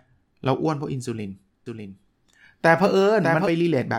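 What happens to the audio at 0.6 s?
Nothing goes wrong at 0.6 s; the speech carries on intact through that moment.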